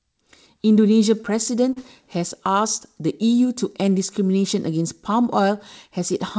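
At 1.73 to 1.79 s there is a short concealed packet loss: about 30 ms of audio failed to arrive in time, so the decoder extended the preceding sound and then blended back in. It is heard as a brief smear or wobble rather than a silent gap, through a call path band-limited at 8 kHz, which fits G.722.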